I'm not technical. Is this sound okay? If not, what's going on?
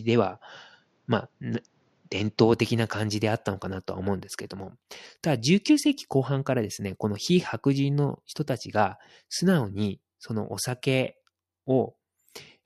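No. From the start to 2.53 s, the speech sounds duller. Nothing above 7.6 kHz comes through, and there's faint extra background noise. The likely cause is an input switched to a poorer device. After 2.53 s the sound clears up, with no gap and no jump in loudness.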